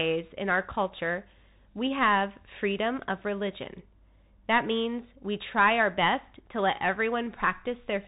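Throughout, the speech is muffled, with nothing above 3.8 kHz, scratchy s sounds and granular hiss from a Bluetooth CVSD headset codec's one-bit delta coding.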